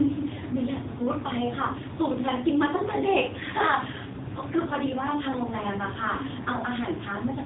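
Speech runs through an AMR narrowband mobile codec for the entire clip, heavily damaged. The voice sounds buzzy and synthetic, with a thin, boxed-in telephone quality, which fits AMR-NB at a low rate near 6.7 kbps. The codec rebuilds speech from a vocal-tract model excited by sparse pulses, so detail is lost. On a spectrogram, energy stops at a hard ceiling at 3.8 kHz, with nothing above it.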